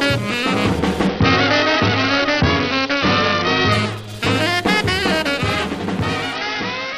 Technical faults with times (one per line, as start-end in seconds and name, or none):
1.07-3.72 Bluetooth SBC bit pool drop
6.35-6.98 Bluetooth SBC bit pool drop